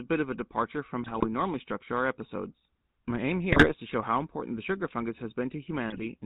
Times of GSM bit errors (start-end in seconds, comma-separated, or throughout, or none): 1.02-1.27, 3.52-3.75, 5.89-6.07